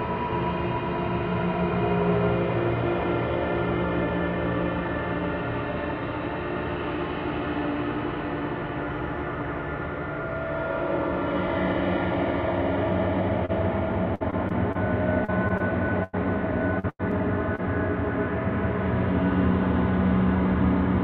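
At 13.45 to 13.51 s a brief smear interrupts the sound, a short wobble where the texture is carried on for a moment before the real audio resumes. This is short concealed packet loss. A small piece of the stream arrived too late to decode, so the receiver extended the preceding sound through the hole for about 34 ms and then blended back into the real signal.

From 14.15 to 16.15 s the sound turns choppy, breaking up repeatedly with fragments missing. It happens again from 16.79 to 17.60 s, where the breakup is denser. This is repeated packet loss, which gives the robotic sound. Data kept failing to arrive, and each hole was patched by continuing the last sound before the next hole followed. The longest holes run to about 96 ms. Concealment fills roughly 14% of the first stretch and 21% of the second.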